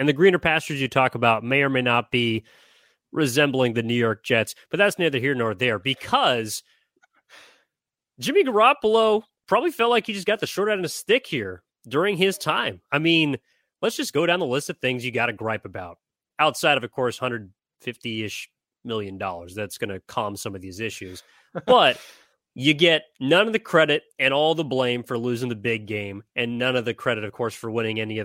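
No technical faults detected.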